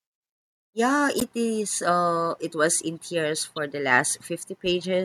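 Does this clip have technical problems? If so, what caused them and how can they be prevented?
Yes: a brief chirp or burst of noise from 1.18 to 1.23 s in the speech is a corrupt frame decoded, where a few damaged compressed frames were played back with misread data. Checksums with concealment of failed frames prevent it.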